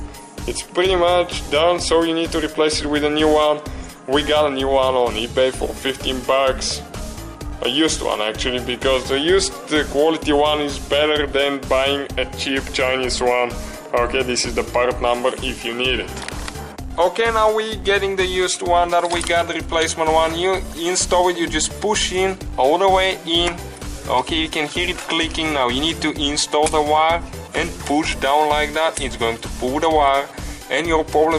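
Nothing stood out on listening to this audio.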